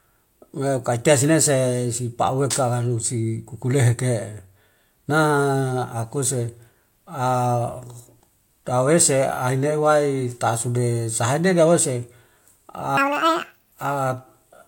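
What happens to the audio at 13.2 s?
The reader is taking pairs of samples as single frames, as if the stream were two-channel or twice as wide, so the audio is read two samples at a time. From 12.97 to 13.72 s the speech runs at double speed, an octave higher.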